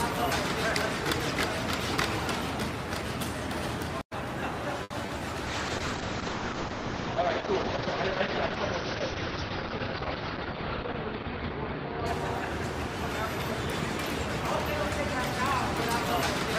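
From 4.83 to 4.92 s the sound hangs with a slight buzz or dip for about 70 ms without losing anything: a short stall from a late packet. The jitter buffer ran dry and stretched the last sound until the packet arrived, adding 70 ms of delay.

At 5.06 to 5.10 s and again at 5.18 to 5.22 s there are brief smears. Each is short concealed packet loss, where 20 ms never arrived and was filled by extending the preceding sound.

From 5.47 to 13.36 s the audio turns rough, watery or muffled. This is a call bitrate drop from 64 to 8 kbps, which narrowed the bandwidth from 20 kHz to 6 kHz. It stayed at its lowest for about 5.6 s.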